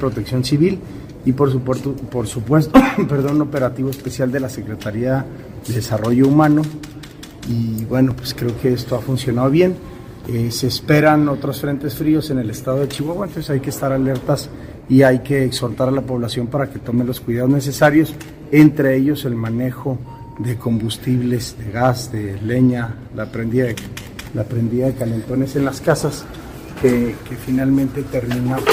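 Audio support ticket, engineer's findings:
Repeated buffer at 8.11 s: one 10 ms block played twice, heard as a single click. Output device underrun; playback reissued the last buffer. Waveform shows an identical 10 ms segment back to back with a step at the join.

Repeated buffer at 24.03–24.05 s: same 10 ms block played three times, a brief buzz at roughly 100 Hz repeat rate. Spectrogram shows thin vertical broadband lines at each join. Nothing appears dropped.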